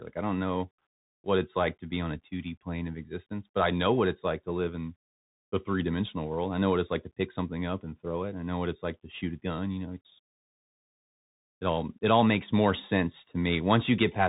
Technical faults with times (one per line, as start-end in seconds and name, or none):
0.00-14.29 Bluetooth CVSD headset codec